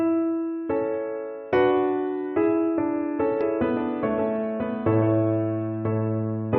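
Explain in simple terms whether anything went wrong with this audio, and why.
A doubled audio track starts abruptly at 3.41 s and runs to the end. From that point, the same sound plays twice: a second copy trails about one second behind the first, somewhat quieter but otherwise identical. It has no fading tail or echo-like room sound, so it isn't a natural reflection. The likely cause is the audio being picked up a second time through a slower route and mixed back in.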